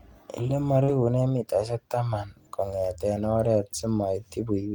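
A speech recording with two closely overlapping packet faults. From 0.83 to 0.90 s there is short concealed packet loss. About 40 ms of audio never arrived in time. The decoder bridged the hole by extending the preceding sound, then crossfaded back. This leaves a brief smear or wobble. Just after, from 0.88 to 0.94 s, comes a lost packet rebuilt from error correction. Roughly 40 ms was restored from low-bitrate backup copies carried in the following packets, which fits two lost packets. There is no gap, but those frames sound rougher and noisier.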